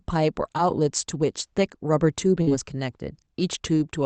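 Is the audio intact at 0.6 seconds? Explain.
No, there's a short concealed packet loss at about 0.57 s. Roughly 10 ms of the call arrived too late, so the decoder patched the gap by extending the preceding sound and easing back into the real signal. You hear it as a tiny smear or wobble.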